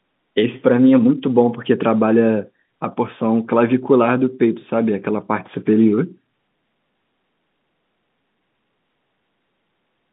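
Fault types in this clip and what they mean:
The speech comes through an ordinary telephone channel, A-law G.711 at 64 kbps, with the usual line band of roughly 150 Hz to 3.6 kHz and no audible faults.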